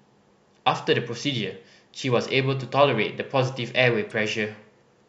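At 4.10 s a corrupt frame is decoded: flipped bits misplace energy across a few frames, giving a brief chirp, squeak, blip or burst of noise near -30 dBFS, visible as a stray vertical spectrogram smear.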